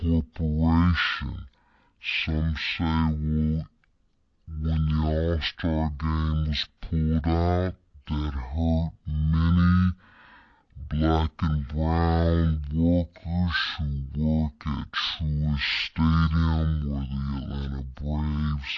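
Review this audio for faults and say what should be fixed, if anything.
A wrong sample rate runs through the whole recording. The samples are being clocked out at about half the rate they were captured at, with no conversion in between. The slowdown fits audio recorded at 44.1 kHz being played back at 22 kHz. Because speed and pitch are tied to the same clock, the speech runs at 0.5 times normal speed and sits 12 semitones low, a full octave, so every voice sounds deep, drawn out and sluggish. Fix it by making the playback path read the file's declared rate, or by resampling explicitly whenever the output device runs at a different rate.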